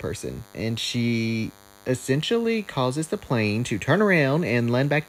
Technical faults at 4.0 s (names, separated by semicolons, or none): DECT cordless phone buzz